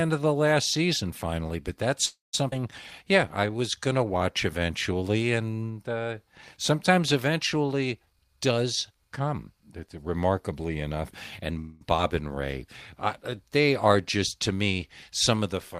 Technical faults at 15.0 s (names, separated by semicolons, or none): none